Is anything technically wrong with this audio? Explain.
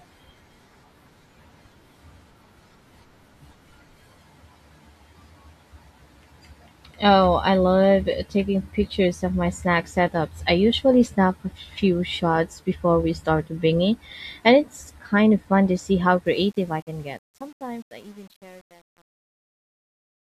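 Yes. Truncation distortion on a fade runs from 16.26 s to 20.33 s, starting just after "fun to see how". The fade-out, which begins around 16.3 s and ends at 20.3 s, is quantised without dither to a coarse step size, consistent with an 8-bit stage. As the level drops, the waveform collapses into a few square steps. From about 16.69 s to the end, the tail sounds gritty.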